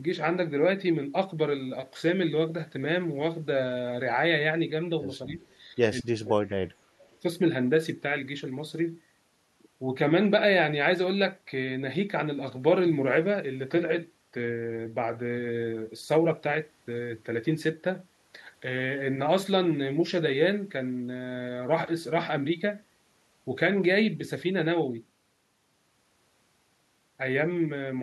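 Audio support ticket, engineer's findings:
Speech suppressed in double talk at 5.32–5.43 s and 5.75–5.79 s, dips near 10 dB. 6.02–7.02 s, near 35 dB. Likely echo canceller ducking the loudspeaker-side talker along with the echo.

Echo leak at 5.50–5.56 s and 7.11–7.17 s. Faint 217 ms delayed copy, about 40 dB down. Likely residual loudspeaker echo passed by the canceller.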